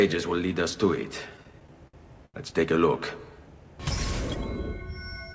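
Between 1.30 and 2.36 s, packets reached the receiver late or more slowly than playback used them, so the jitter buffer ran dry eight times. Each time, the receiver stretched the last sound across the gap, fading it during the longer waits, the longest about 85 ms. About 210 ms, a fifth of that span, was filled this way. Nothing is lost, but these repeated stalls (stutter) make the audio drag and hiccup through the G.722 call path, which carries nothing above 8 kHz.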